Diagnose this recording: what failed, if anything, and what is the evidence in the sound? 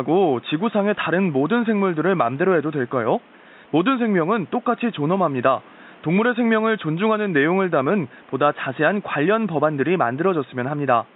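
Nothing failed in this recording; the only thing to hear besides the speech is the room's own background noise, sitting about 29 dB below it.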